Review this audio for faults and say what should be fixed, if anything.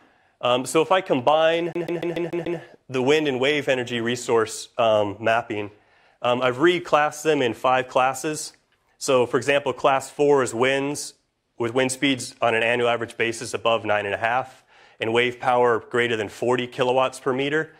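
From 1.73 to 2.59 s the audio has a CD stuck on one turn: a scratch sends the laser back one track at the same point on each rotation, so the same 145 ms slice replays six times, each return marked by a brief mute. It sounds like a quick, regular stutter. On a waveform it shows as identical blocks repeating at even 145 ms spacing with small gaps between them, and a spectrogram shows the same pattern stamped out in a row. To prevent it, re-rip from a clean or resurfaced disc using secure, error-checking extraction.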